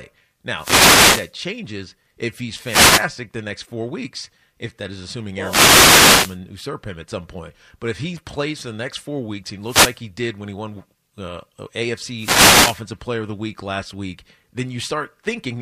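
The wireless microphone's radio signal fades repeatedly as reflected paths cancel, so receiver noise rises and masks the speech. Each wireless microphone noise hit is a brief burst of static: 0.54–1.33 s, 2.61–3.09 s (after "changes if he's"), 5.40–6.39 s, 9.61–10.01 s, and 12.16–12.82 s.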